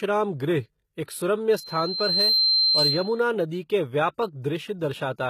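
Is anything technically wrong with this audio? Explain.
Yes, there are two faults.

Throughout, the treble sounds plainly gritty and synthetic, with nothing above 14.9 kHz on a spectrogram; the likely cause is HE-AAC compression, rebuilding upper bands from copied lower ones at a low bitrate.

From 1.50 to 3.24 s, just before "नदी के", a loudspeaker feedback squeal at 4.1 kHz swells over roughly 0.7 s to about 5 dB above the speech. The loop gain passes one at that frequency, and it shows as a bright horizontal spectrogram line.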